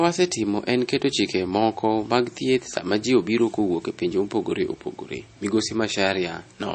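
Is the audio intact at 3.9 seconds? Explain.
No. At 3.9 seconds, as across the whole clip, the speech sounds watery and swirly, with metallic chirping on s sounds and softened consonant attacks, and nothing is heard above about 8.3 kHz. This is MP3 compression, likely at a low bitrate, which fits about 32 kbps. Short of bits, the encoder cuts the treble at a fixed point and drops weaker frequency lines, which flicker on and off between frames.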